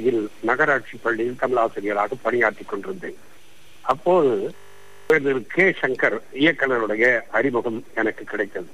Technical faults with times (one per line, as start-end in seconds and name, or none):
4.56-5.10 system hang loop